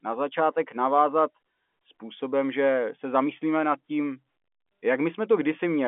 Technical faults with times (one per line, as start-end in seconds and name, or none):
none